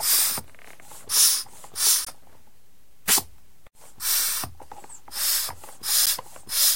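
At 2.05 to 2.07 s and at 6.06 s, gaps between stream segments open hard-edged silent holes of about 21 ms and 11 ms, four seconds apart.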